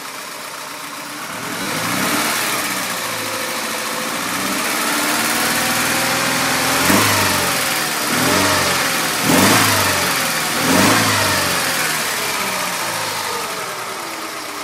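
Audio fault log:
1.62 to 1.65 s and 8.42 s, repeated buffer: new audio showed up late, so the device replayed its last 10.7 ms chunk, which fits a 512-sample buffer. Three hard-joined repeats at 1.62 s make a quick buzzy stutter, and the single repeat at 8.42 s is just a click.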